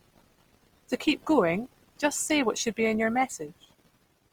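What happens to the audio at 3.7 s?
At 3.7 s the speech carries the Opus compression heard across the whole clip: it sounds grainy and rough, with a noisy texture on tonal parts, likely from a music-mode encoder at about 24 kbps refilling starved bands with folded or noise content while keeping full bandwidth.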